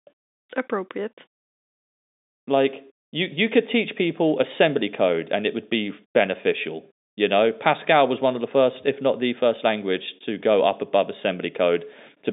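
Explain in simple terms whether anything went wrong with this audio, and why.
Nothing went wrong here: the speech comes over an ordinary G.711 telephone connection, so it has the narrow, phone-line quality of a landline call, carrying sound only from about 250 Hz up to 3.7 kHz, and nothing goes wrong anywhere in the recording.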